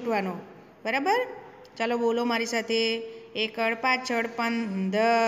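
No technical faults are audible.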